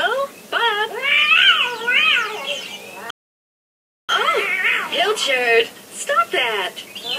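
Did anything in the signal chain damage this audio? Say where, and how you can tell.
Yes: a rebuffering stall at the playback stage, where the player drained its downloaded audio and waited for more. The sound drops to silence at 3.10 s and picks up again at 4.09 s exactly where it stopped, so nothing is missing, but about 0.99 s is added.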